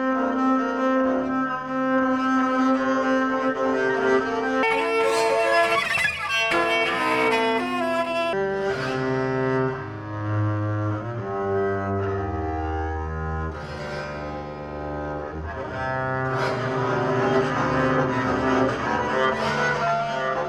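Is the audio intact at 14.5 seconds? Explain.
Yes, at 14.5 seconds the audio is intact, with no dropout, click, distortion or other fault to be heard at that moment.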